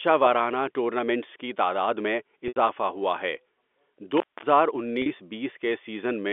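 Speech carried over a G.711 telephone channel, with the expected narrow band and nothing above about 3.5 kHz, suffers from packet loss with pitch repetition twice. From 2.48 to 2.56 s, 80 ms of audio went missing, which fits about four 20 ms packets. The receiver bridged the gap by looping the last pitch period and fading it out over about 50 ms, so the sound briefly holds and buzzes, sinks toward silence, then cross-fades back. At 5.02 to 5.06 s a 40 ms loss, likely two packets, is short enough that the repeated period simply sounds like a slightly held, buzzy tone before the sound continues. Separately, an intermittent contact, a loose cable or plug momentarily opening the circuit, breaks the signal from 4.17 to 4.43 s. For about 0.23 s the sound drops out, with crackle as the connection opens and again as it closes, and faint hiss fills the gap.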